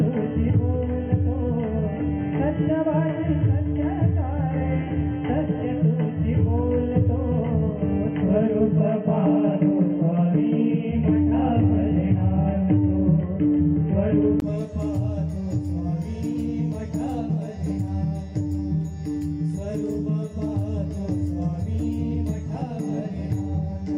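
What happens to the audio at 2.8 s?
At 2.8 s the audio sits inside a narrowband stretch running from 0.0 s to 14.42 s, where nothing is present above 3.2 kHz, so it sounds dull and boxy, with its own faint noise floor and a level a few decibels different from what follows. A brief 20 ms gap marks the change back at 14.42 s. The likely cause is the input switched to a poorer device, such as a headset call profile with a narrower passband.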